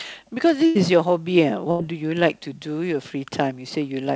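At 0.66 s and again at 1.71 s, the speech hits a burst of packet loss. The first gap runs to 0.77 s, the second to 1.81 s. Audio stopped arriving for roughly 100 ms and then 80 ms. The receiver stretched the last sound across the hole while fading it out, filling about 90 ms and 80 ms. That fill gives a brief held buzz or fading hiss. The speech then resumes further on, with a short stretch missing. The call path's band limit holds throughout: nothing above 8 kHz, which fits wideband G.722.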